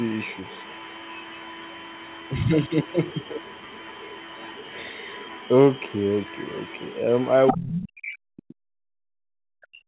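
Other side's voice leaking through runs from 0.00 to 5.52 s and again from 5.72 to 7.31 s, a faint second voice roughly 25 dB under the speech. It returns in short, louder scraps from 7.47 to 7.55 s, only a few dB down, and from 7.73 to 7.87 s, about 10 dB down. The likely cause is the far end playing over a loudspeaker and reaching the microphone, with the echo canceller failing to subtract all of it.

Speech suppressed in double talk follows from 7.53 to 8.55 s, about a second during which the talker's voice sinks by as much as around 40 dB, and again from 9.15 s to the end of the clip. Here both sides are talking at once, and the canceller likely cannot tell the talker from the echo, so it attenuates everything and the voice thins or breaks up.

Background gated by the echo canceller hits from 8.83 to 8.87 s. For those 40 ms the room sound drops by about 38 dB and then returns. The canceller clamped the microphone while the loudspeaker was active, which leaves a brief hole in the ambience. 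Throughout the clip the audio is band-limited at 4 kHz by the G.711 call codec.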